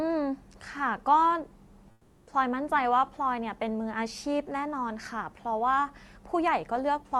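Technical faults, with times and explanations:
1.91 to 2.27 s, comfort noise in place of the background: for about 360 ms the room tone, which sits about 31 dB below the loud parts, turns into a flat, featureless hiss and drops about 5 dB. That's likely Opus DTX: with no speech detected, the sender stops sending real audio and the receiver fills the gap with synthetic noise that only roughly matches the background's shape, on top of the codec's top end stopping around 12 kHz.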